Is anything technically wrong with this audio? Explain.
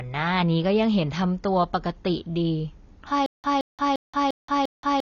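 Yes. Throughout, the speech is dull and fizzy, with nothing above 6.9 kHz. This is AAC compression, likely at a low bitrate near 24 kbps. The swirling smear, not just a clean cut-off, separates it from a plain low-pass filter.

From 3.26 s to the end there is a stutter with silent gaps: the same 171 ms burst repeats five times, each followed by 177 ms of digital silence, every 348 ms. The likely cause is a stalled stream replaying its last fragment. The repeated fragment is what distinguishes it from simple dropouts.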